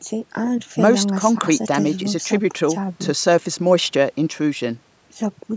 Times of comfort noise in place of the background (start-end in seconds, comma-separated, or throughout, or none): none